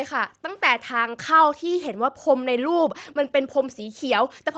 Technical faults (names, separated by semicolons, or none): background gated by the echo canceller; echo leak